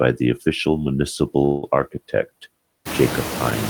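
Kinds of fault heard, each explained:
Noise suppressor artifacts: background noise drops by about 18 dB between phrases and swells under speech.
Call audio freeze: from 1.45 to 1.64 s the sound stalls into a fading buzz or hiss, likely an emptied jitter buffer, and resumes where it stopped, skipping nothing.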